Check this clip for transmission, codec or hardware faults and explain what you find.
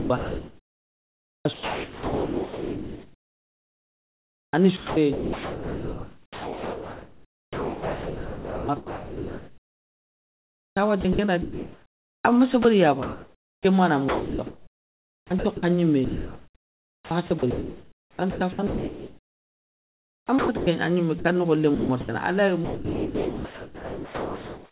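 Two kinds of fault run through this speech, both likely from the sender's voice detector gating the signal. The band stops at 4 kHz, which fits a G.711 call path at 64 kbps.

Sound chopped by the voice detector occurs from 0.0 to 12.25 s, 14.09 to 15.63 s (starting after "ma na"), 16.05 to 20.67 s (ending before "an gnimé"), and 21.75 to 22.09 s. The detector keeps switching transmission on and off, so syllable edges and quiet stretches are swapped for synthetic comfort noise. Speech sounds choppy. Unlike a single dropout, the gating repeats more than once within each stretch.

Sound dropped by the voice detector occurs at 12.63 to 12.65 s, 13.03 to 13.65 s (just before "ma na"), 21.19 to 21.25 s, and 22.65 to 24.71 s. Each time, the sound was judged to be background and sending stopped. The receiver filled the gap with steady comfort noise, about 0.2 s of speech is lost in the 13 s gap and about 1.8 s at the end. 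Unlike chopping, each of these is one continuous stretch of even noise, with speech returning only when the detector triggers again.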